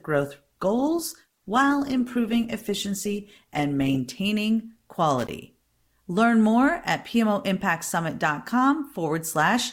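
From the start until 4.0 s the speech is thin and smeared, the adaptive stream starting at a low bitrate, likely near 16 kbit/s, then stepping up cleanly to higher quality without any gap, unlike a dropout. Between 5.18 and 5.29 s an irregular burst of scratchy crackle is loose connector crackle, an intermittent contact chopping the signal, ragged rather than a single clean click.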